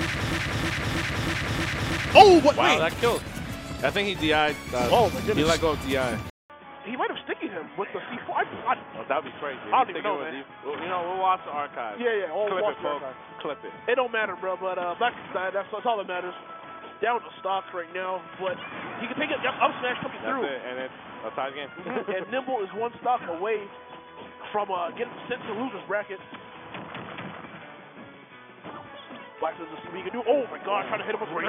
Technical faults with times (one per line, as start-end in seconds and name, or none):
0.00-2.15 broken-record loop
6.30-31.48 input switched to a poorer device